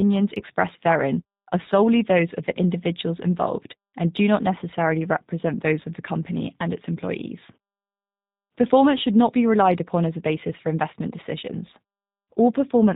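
Throughout the speech, G.729 codec damage is plainly audible: each 10 ms frame is rebuilt from a vocal tract filter, pitch predictor and a few pulses, which fits an 8 kbit/s stream. The sound is rough and synthetic, and a spectrogram shows nothing above 4 kHz, while pauses fall cleanly silent.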